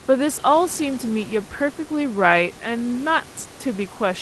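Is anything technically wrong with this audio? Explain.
No, the speech reaches the listener through a call codec that limits the audio bandwidth to about 12 kHz, with the room's background noise sitting about 24 dB below the speech, and nothing in the signal points to a technical problem.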